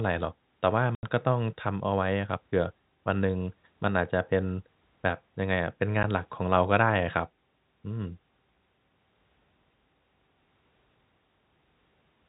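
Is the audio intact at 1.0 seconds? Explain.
No. Packet loss filled with silence cuts the speech from 0.95 to 1.03 s. The 80 ms gap fits eight lost 10 ms packets. The receiver played silence in their place. The sound stops dead at hard edges.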